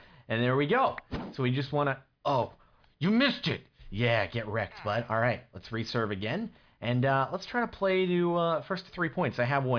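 There are no technical faults to describe in this audio.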